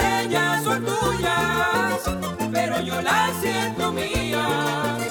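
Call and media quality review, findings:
Drift correction step, 1.75–2.27 s: audio runs 5.6% fast for about half a second, pitch up roughly 94 cents (near a semitone), then snaps back. Likely an adaptive resampler or clock-sync stage stepping its rate to drain the buffer. Spectrogram: harmonics jump up together, flat offset, abrupt return. Waveform: events visibly compressed in time across that span.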